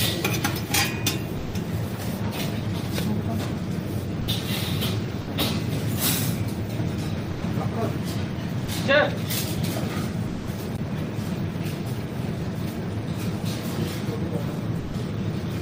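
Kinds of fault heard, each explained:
Sound dropped by the voice detector: seven gaps of 20 to 200 ms where the audio gives way to steady comfort noise, likely from Opus DTX halting transmission.
CD skip: at 10.77 s a brief mute as the laser jumps to another spiral turn, so playback resumes from a different point.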